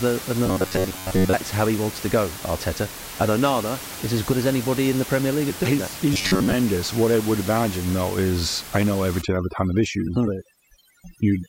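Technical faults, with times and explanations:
0.46 to 1.33 s and 6.14 to 6.54 s, robotic sound from repeated short buffers. The speech turns into a stiff, metallic buzz pitched at 93.8 Hz. That pitch fits a segment of about 10.7 ms being played over and over. New audio likely arrived too slowly, so the playback filled the gaps by looping the last short buffer. In the first run most of the time is filled this way, and in the second about half. The real audio in between is skipped.
9.22 to 11.49 s, overdone noise removal. From 9.22 s to the end, a noise reduction stage acts far too strongly. The room noise, which sits about 13 dB below the speech, drops and breaks up into twinkling specks. Frequency bands close to the noise level are cut out along with the quiet parts of the speech.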